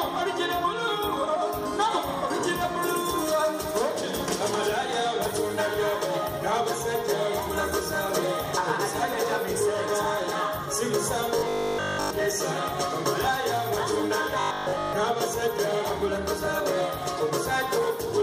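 Robotic sound from repeated short buffers at 11.39–12.11 s and 14.41–14.93 s: the audio collapses into a rigid 50 Hz buzz, likely from essentially all of it being a looped 20 ms buffer.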